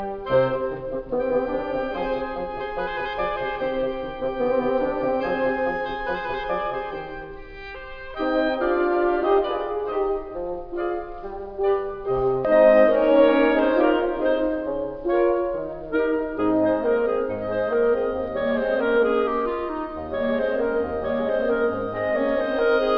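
No technical faults turn up anywhere in this music. There is nothing to place on a timeline and nothing that points to a problem in how the audio was captured or passed along.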